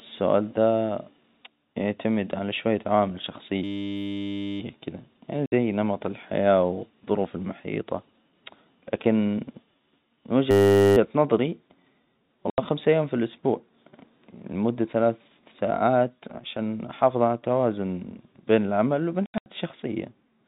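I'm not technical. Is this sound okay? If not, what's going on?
No. From 3.64 to 4.60 seconds, and again from 10.51 to 10.97, the speech gives way to a steady electric buzz. This is a system hang loop: the computer froze while the sound hardware kept replaying one 10 ms scrap, 100 times a second.

At 5.46, 12.50, and between 19.26 and 19.46 seconds, the speech drops out in short silent holes, lasting 60 ms, 80 ms, and several gaps spread over 200 ms. This is packet loss filled with silence: pieces of audio never arrived, so blanks were played instead.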